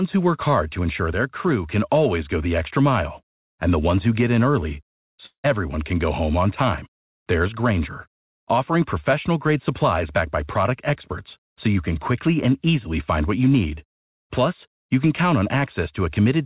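From 5.26 s to 5.46 s, just after "who get in early", the sound breaks off and is replaced by a buzzy continuation of the last sound that fades over 0.18 s, leaving 0.1 s of silence before the audio resumes at "can go home on" with 0.18 s of material gone. The likely cause is a long network dropout, with the receiver concealing the gap and never playing the lost audio. The buzz stays inside the 4 kHz ceiling heard throughout, which fits G.711 mu-law coding.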